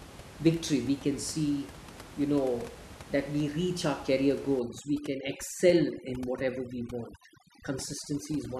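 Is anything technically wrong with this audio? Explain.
Yes. From 4.60 s, just after "we reach our career", to the end, the background drops and breaks up into twinkling specks. This is overdone noise removal: an over-aggressive noise reducer pulls individual frequency bands down whenever they sit near its noise estimate, stripping quiet parts of the speech along with the room noise. Before this point, that room noise sits at about 17 dB below the speech.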